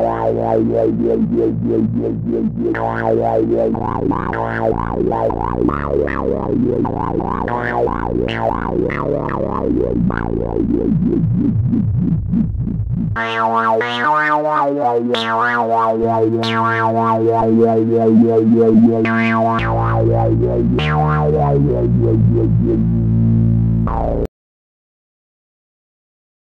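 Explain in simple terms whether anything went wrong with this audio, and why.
At 24.26 s the sound cuts off abruptly and the last 2.3 s, right up to the end, are dead silence with no background hiss at all. That is an audio dropout to silence: the input was likely lost, so only blank samples were recorded.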